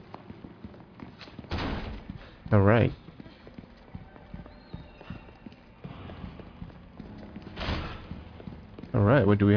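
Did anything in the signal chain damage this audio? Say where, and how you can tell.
No, nothing stood out on listening that would point to damage at any stage of the signal chain.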